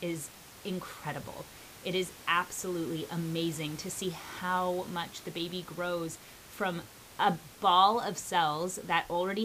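There are no technical faults to describe in this speech clip.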